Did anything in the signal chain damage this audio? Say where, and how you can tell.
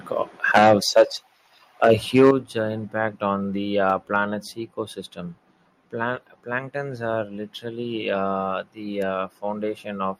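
Yes. Microphone overload at the converter damages two passages, from 0.54 to 1.02 s and from 1.84 to 2.31 s. The loudest syllables there have a harsh, crackling edge because their peaks are flattened. The first burst drives about 12 dB past full scale and the second about 5 dB, with roughly 7 percent of samples pinned at the limit. The likely cause is microphone input volume set too high, so peaks exceeded the converter's range and their tops were cut off.

Call processing adjusts the device gain. The microphone volume is stepped down three times, each as a sudden drop in level of both voice and background: about 4 dB at 0.58 s, about 9 dB at 2.31 s, and about 2 dB at 4.35 s. The first two fall inside or right at the end of the clipped passages. That points to software likely reacting to the overload by lowering the input volume in single steps rather than ramping it.

The analogue wiring picks up an electrical switching spike at 9.02 s. 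It is a sharp transient laid on top of the audio, far too brief to come from the source and unrelated to the surrounding level. Its shape fits an arc from a nearby switch, motor or static discharge, likely coupling into the microphone line as an impulse rather than coming from anything digital.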